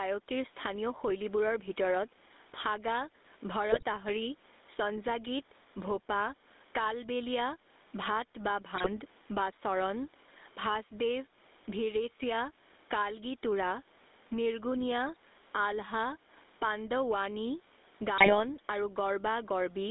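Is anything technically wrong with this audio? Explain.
Yes, three problems can be heard in this speech clip.

Gain pumping runs through the whole clip. The gain swings by roughly 15 dB. The likely cause is input gain set far too high, with a fast limiter or compressor clamping down on each peak and then letting go. This is not simply a noisy room: the room noise itself sits well below the speech. Loud and soft passages are squeezed together, giving a flattened, crowded sound.

GSM full-rate coding also runs throughout. The audio is confined to roughly 250 Hz to 3.7 kHz, and the speech has a plainly audible buzzy, gravelly roughness. The coder models the vocal tract and drives it with a coarse, regularly spaced pulse train, keeping only part of the excitation, which fits a 13 kbps full-rate codec. Band-limiting alone would sound muffled but clean. The rasp and granularity point to this codec specifically.

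GSM bit errors occur at 3.72–3.84 s, 8.76–8.91 s and 18.18–18.45 s. Each burst lasts between about a tenth and a quarter of a second, and the speech breaks into squawks, pops and gargling. Corrupted bits on a weak radio link reach the decoder, so the filter, pitch or gain values are wrong for six or seven frames. The spectrum bends or the level jumps. Unlike dropouts or packet-loss concealment, the sound turns harsh and garbled instead of going silent or repeating.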